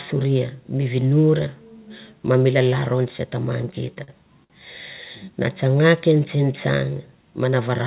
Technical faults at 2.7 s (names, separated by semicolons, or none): none